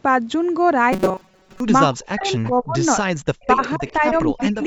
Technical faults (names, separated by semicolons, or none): robotic sound from repeated short buffers; speech suppressed in double talk; echo leak